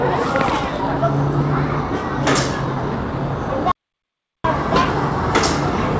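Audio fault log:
3.72–4.44 s, audio dropout to silence: the sound stops dead for about 0.73 s into silence with no room tone, likely from lost input, unlike smoothed-over packet-loss concealment.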